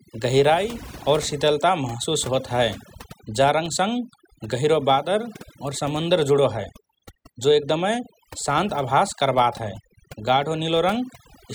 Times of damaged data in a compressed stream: none

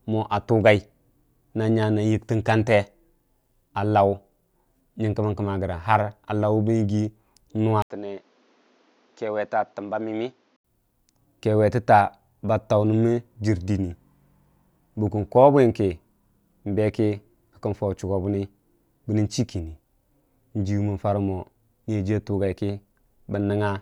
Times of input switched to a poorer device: 7.82-10.64

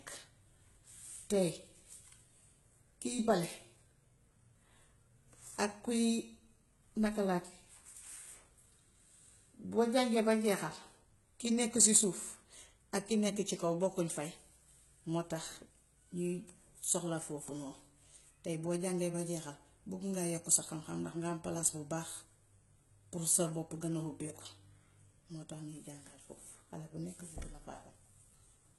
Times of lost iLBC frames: none

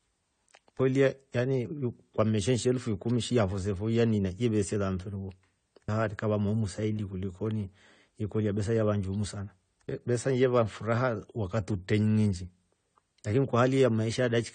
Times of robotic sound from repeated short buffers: none

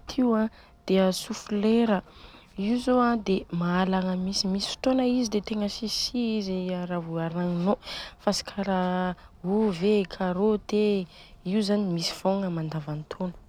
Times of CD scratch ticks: 1.49-2.17

